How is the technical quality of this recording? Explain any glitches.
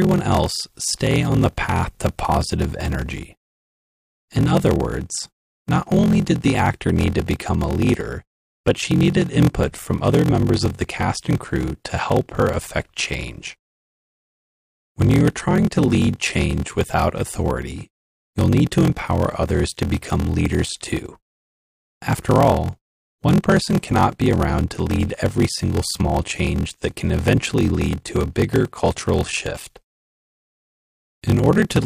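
The recording has one persistent fault that runs through the whole clip.

Block size mismatch (padded), from start to finish: one stage hands over blocks shorter than the next stage reads, and the shortfall in each block is filled with zeros. The pattern fits a 1024-sample read block. Each block gets a brief silent gap, heard as a steady buzz at about 43.1 Hz. Because of the inserted gaps, the audio plays at 0.861 times normal speed, yet keeps close to its normal pitch.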